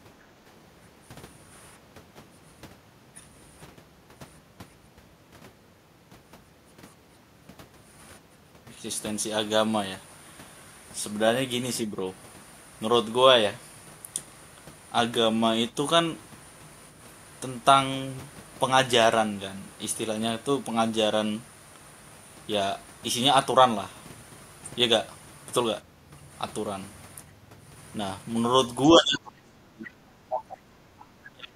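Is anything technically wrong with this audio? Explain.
Yes. The speech is pulled down in short bursts, with the problems clustered near the end.

Speech suppressed in double talk occurs at 0.36 to 0.42 s, 28.91 to 29.94 s, 30.16 to 30.23 s and 31.28 to 31.56 s. The talker's level dips sharply. The brief dips at the start and near 30.2 s are mild, around 15 dB. The one-second dip from 28.91 s goes much deeper, roughly 35 dB, and the final one reaches about 30 dB. The likely cause is an echo canceller that could not tell this talker apart from loudspeaker echo while both sides spoke at once, so it attenuated everything.

The other side's voice is leaking through from 30.3 to 30.57 s. A second voice is audible at a fairly strong level, only about 5 dB below the main speech. This is likely residual loudspeaker output that the echo canceller failed to remove from the microphone signal. It arrives as a short scrap rather than a sustained stretch.

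The background is gated by the echo canceller from 30.78 to 31.0 s. For about 200 ms the room sound drops by about 11 dB and then returns. That points to the canceller clamping the microphone hard while the loudspeaker was active and releasing once playback stopped, leaving a brief hole in the ambience.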